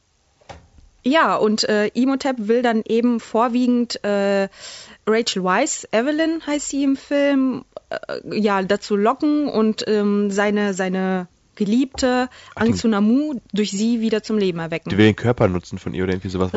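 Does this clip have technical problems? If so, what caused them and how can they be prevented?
No, nothing here points to a technical problem, so there's nothing to trace back to a cause or guard against.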